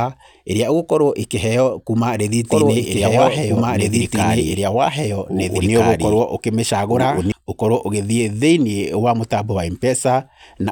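From 2.5 s to 7.32 s the speech is heard twice. A doubled audio track lags about one and a half seconds behind, roughly as loud as the original. It is full-band and dry, and it starts and stops abruptly. A second, slower capture path is the likely cause.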